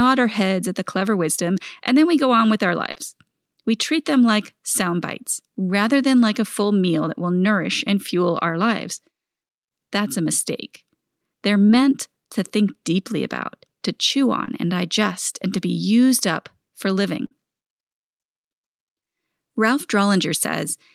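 Short concealed packet loss occurs at 1.35 s, 2.91 s, 11.67 s and 14.45 s: packets covering about 20 to 40 ms of speech arrived too late, so the receiver extended the preceding sound to fill each gap, leaving a brief smear or wobble before normal audio resumes. At 17.26 s a burst of packet loss removes about 60 ms. The receiver stretches the last sound for roughly 50 ms while fading it, producing a short held buzz or hiss, then jumps ahead with that stretch of speech missing.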